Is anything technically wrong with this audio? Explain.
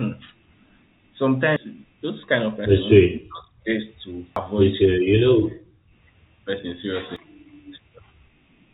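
Yes. There are three kinds of fault.

Audio missing between chunks occurs at 1.56, 4.36 and 7.16 s. Each time, roughly a fifth of a second vanishes and the two sides butt together with no silence. The cause is likely a recorder working in chunks of about 3 s and dropping audio at each handover. Its regular spacing and hard splice set it apart from suppression dips.

Speech suppressed in double talk happens from 2.99 to 3.68 s and again briefly at 5.83 to 5.91 s. The talker's level falls by around 40 dB, most likely because the echo canceller couldn't separate the talker from the far side's loudspeaker echo and turned both down. Unlike a chunk gap, nothing is skipped. The sound is attenuated in place.

Background gated by the echo canceller occurs from 5.40 to 5.55 s. The room sound drops by about 37 dB for roughly 150 ms while the loudspeaker plays, then returns when the canceller releases. 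It affects the ambience rather than the talker.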